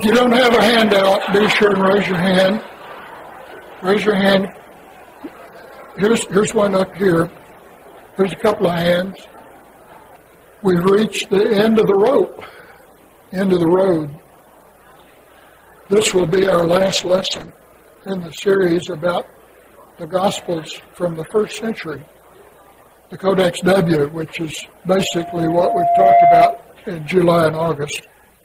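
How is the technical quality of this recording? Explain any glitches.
Two glitches stand out, one of bandwidth and one of acoustic feedback.

From 15.98 to 17.56 s there is a call bitrate drop. The connection's bandwidth estimate fell, so the encoder coded with far fewer bits. The sound turns coarse and muffled, with the top end cut from 20 kHz to about 8 kHz. This fits a fall from 48 to 13 kbps.

From 24.97 to 26.63 s there is a loudspeaker feedback squeal. The microphone picked up its own loudspeaker output, and the loop gain passed one at 692 Hz. That tone swells over about a second into a squeal, ending roughly 5 dB above the audio.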